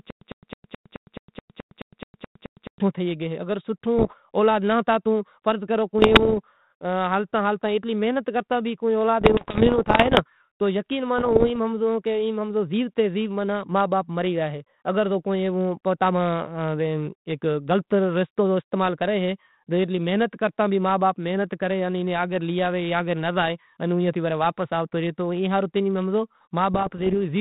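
Stutter with silent gaps runs from the start of the clip to 2.8 s. A short burst of about 104 ms repeats twelve times, each followed by about 110 ms of digital silence, every 214 ms. This is likely a stalled stream replaying its last fragment and losing the audio in between.

Bit errors on an ADPCM link follow at 3.98 to 4.14 s, just before "اولاد ناں ہتو تو", then at 5.98 to 6.39 s, right after "ہتو تو فرض کرو", and again at 9.20 to 10.21 s, 11.18 to 11.56 s and 26.74 to 27.15 s. Flipped bits upset the decoder's step size and predictor, so each error rings on as pops and rough bursts with brief level jumps. The first burst is the densest, with an error rate around a couple of percent, and the later ones are lighter. The 32 kbit/s G.726 path carries nothing above 4 kHz.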